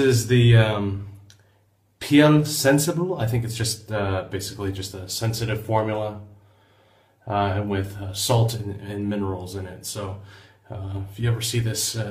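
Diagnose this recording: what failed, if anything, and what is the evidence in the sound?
Nothing failed; no stage shows any audible fault.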